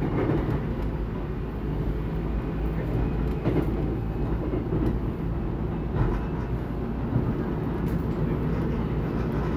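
No technical faults can be heard anywhere in this recording of sounds; the signal stays steady and intact throughout.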